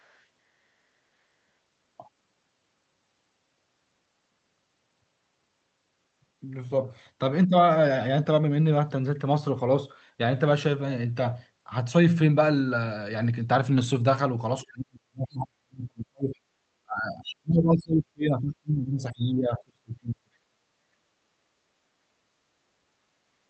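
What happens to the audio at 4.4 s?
Nothing goes wrong at 4.4 s: the speech passes through intact there, carrying only the ordinary coding character of the WebRTC call path.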